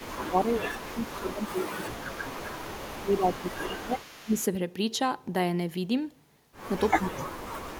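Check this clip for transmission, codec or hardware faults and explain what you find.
Two kinds of fault are present in this speech: repeated level suppression during overlapping talk, and a faint delayed echo.

Speech suppressed in double talk occurs from 0.0 to 2.4 s, 2.89 to 4.36 s and 6.93 s to the end. The voice dips by around 20 dB in the first two spans and by roughly 40 dB in the last. The likely cause is an echo canceller that could not separate near-end speech from loudspeaker echo while both sides talked, so it attenuated everything.

Echo leak runs from 0.53 to 4.37 s. A copy of the voice returns 332 ms late at about 25 dB below the direct speech, faint. This likely comes from a loudspeaker endpoint whose echo canceller left residual pickup, which was sent back down the line.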